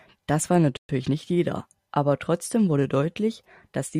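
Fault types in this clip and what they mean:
Playback stall: The player most likely ran short of buffered data or had its output thread held up, so nothing reached the output for about 120 ms. The speech cuts out abruptly at 0.77 s and resumes at 0.89 s after a brief, clear gap.
Time-compressed catch-up: To work off the backlog left by that gap, the player trims small slices of audio and cross-fades across the joins, running at 1.25 times normal speed. From 0.89 to 1.37 s the speech sounds hurried but keeps its normal pitch.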